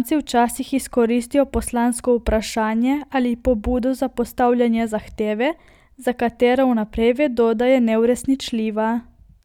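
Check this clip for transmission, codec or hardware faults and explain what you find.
No faults turned up when I checked the clip, so there is nothing to explain.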